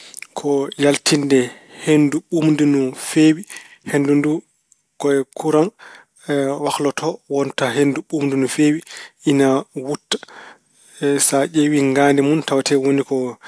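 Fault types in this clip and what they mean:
No technical faults can be heard anywhere in the speech recording, and the signal stays continuous and steady throughout.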